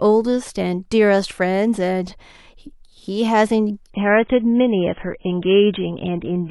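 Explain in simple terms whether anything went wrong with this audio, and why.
Yes: at 3.93 s the adaptive stream switched to a lower bitrate because the connection slowed, so the speech suddenly turns dull, losing everything above 3.8 kHz, without any gap.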